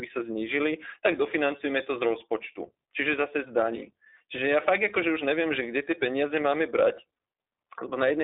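Speech runs through iLBC codec damage for the whole clip, and it is plainly audible. The band is held to a telephone line, roughly 300 Hz to 3.7 kHz, with nothing above 3.8 kHz. The top end sounds dull and boxy. Each short frame's excitation is coded on its own, with no carry-over from the last. That leaves the speech slightly rough and synthetic. The character fits 20 ms frames at about 15.2 kbps.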